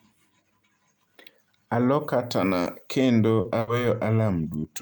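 Short concealed packet loss in this speech recording at 2.63–2.67 s and 3.41–3.47 s (just after "katana kendo"): 20 ms, then 40 ms, never arrived in time, so the receiver extended the preceding sound and blended back, leaving brief smears. A burst of packet loss at 3.59–3.69 s, also after "katana kendo", removes 80 ms; the receiver holds the last sound and fades it down, then resumes further on with that stretch missing.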